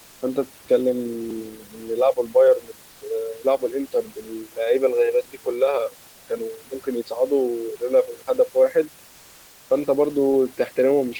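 From 6.09 to 6.27 s, about 180 ms of the speech recording's room background gives way to comfort noise in place of the background. The room noise, sitting about 30 dB below the speech, loses its detail and becomes a steady, featureless hiss. That hiss is about 3 dB quieter. The likely cause is discontinuous transmission, as in Opus DTX. The sender stops sending during a pause, and the receiver fills the gap with synthetic noise.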